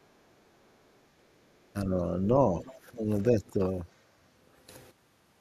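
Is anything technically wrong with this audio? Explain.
Yes. Between 1.73 and 2.63 s, and again from 2.9 to 3.63 s, there is speech suppressed in double talk. The echo canceller likely could not tell the talker apart from loudspeaker echo while both sides spoke, so it pulled the whole microphone signal down. The first dip is shallow, a few decibels, and spread over most of a second. The second is deeper, about 15 dB, and briefer, and there the voice audibly sinks.

At 2.6 to 2.72 s the other side's voice leaks through, a faint scrap roughly 25 dB below the talker. It is likely echo from the loudspeaker that the canceller failed to remove from the microphone, and it arrives just as the first suppressed stretch ends.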